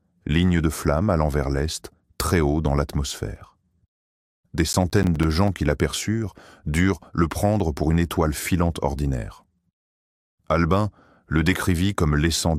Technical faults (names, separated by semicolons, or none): processor overload crackle